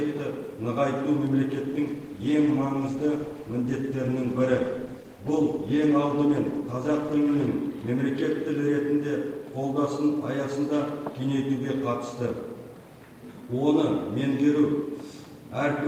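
From 2.02 s to 7.55 s a call bitrate drop sets in: the encoder starves for bits, consistent with a fall from about 64 to 22 kbps. The sound turns rough and watery, and a spectrogram shows coarse, smeared detail until recovery.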